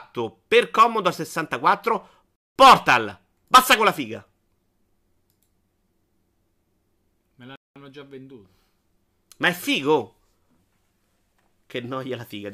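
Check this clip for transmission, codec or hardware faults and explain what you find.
The speech is broken twice by a gap between chunks, from 2.36 to 2.56 s and from 7.56 to 7.76 s. The audio was delivered in blocks about 5 s long, and at each join 200 ms of silence was inserted before the next block began. The result is a short hole in the speech. Unlike a dropout, nothing is missing: the sound resumes exactly where it stopped, just late, and the holes recur at the chunk spacing.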